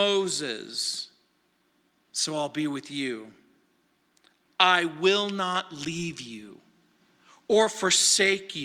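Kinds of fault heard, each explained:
No faults can be heard in this recording.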